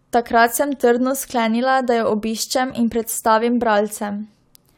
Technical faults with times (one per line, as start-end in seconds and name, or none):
none